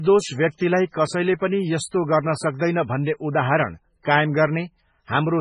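Throughout, heavy MP3 compression, likely starved of bits at about 16 kbps, removes everything above 10.4 kHz and switches weak frequencies on and off, leaving the speech watery and swirling.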